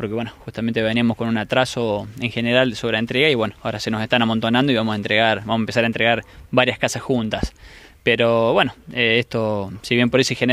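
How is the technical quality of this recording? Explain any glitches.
No glitches, dropouts or level problems are audible anywhere in the recording.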